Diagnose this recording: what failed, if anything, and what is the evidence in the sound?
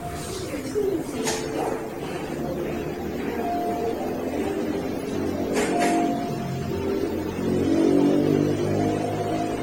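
Codec stage, and it's generation loss throughout: the whole clip sounds swirly, hollow and smeared, with blurred attacks and nothing above 16.6 kHz. That's likely repeated AAC re-encoding, around seven passes at roughly 64 kbit/s, each requantising on a shifted frame grid.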